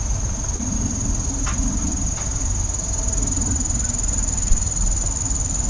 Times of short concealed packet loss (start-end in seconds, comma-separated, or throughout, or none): 0.56-0.61